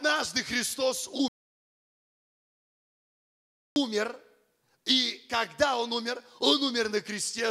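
An audio dropout to silence runs from 1.28 s to 3.76 s, removing about 2.48 s of this sound clip. The audio cuts off abruptly mid-flow and resumes just as suddenly, and the gap between is silent with no background or room tone at all. That points to the input being lost while recording carried on writing empty samples, likely from a disconnected source, a broken link or an accidental mute, so whatever occurred in that stretch is gone.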